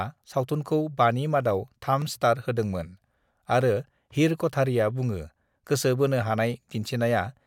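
At 2.02 s and again at 3.61 s the speech drops into a block of digital silence about 0.67 ms long. That fits a 32-sample buffer left unfilled, and each drop is heard as a tick. On a waveform each shows as a flat line, and on a spectrogram as a thin vertical broadband stripe.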